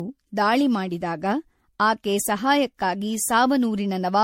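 Throughout the speech, the sound is swirly, hollow and smeared, with consonant attacks blurred and nothing above 16.4 kHz. This points to generation loss, most likely from around seven rounds of MP3 encoding at about 64 kbit/s, each pass requantising on a shifted frame grid so that noise and spectral holes build up. A single encode at that rate would sound thinner but not this phasey. The stacked smearing is what sets it apart.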